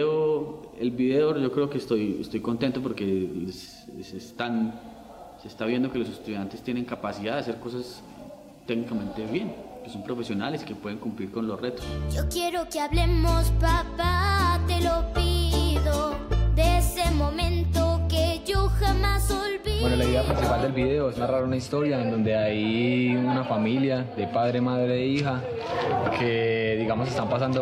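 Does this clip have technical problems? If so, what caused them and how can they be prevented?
No, there are no technical problems in this clip.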